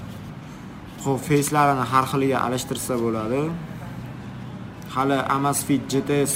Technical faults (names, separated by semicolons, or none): crude rate conversion